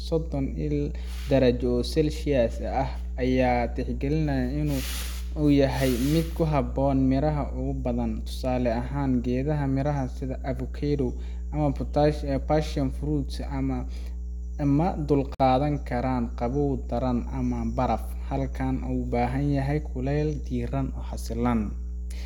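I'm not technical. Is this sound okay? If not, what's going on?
No. A loud, steady low buzz runs under the speech the whole way through. This is mains hum at 60 Hz, leaking in from the power supply. Unlike crackle or hiss, it stays one fixed pitch.

At 15.35 to 15.40 s there is a gap at a join of encoded pieces. The sound stops for about 52 milliseconds and then resumes exactly where it left off, so nothing is actually lost, unlike a dropout that skips material.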